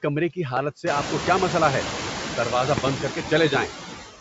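Right from the start there's noise suppressor artifacts running under the whole clip. The suppressor is pulling down the bands it reads as steady noise, frame by frame, but only by about 5 dB, so the noise dips between phrases and swells back under the speech. That pumping is easiest to catch once the room noise steps up around 1 s.

At 0.57 to 0.59 s, just before "سے آپ کو کیا", there's a single loud pop sitting well above the speech, most likely a brief voltage spike from a plug, switch or static discharge. Then from 2.78 to 2.89 s, right after "کیا مسئلہ ہے دروازہ", a second loud pop event hits as two sharp clicks in quick succession, again far louder than the voice. The speech carries straight on underneath both.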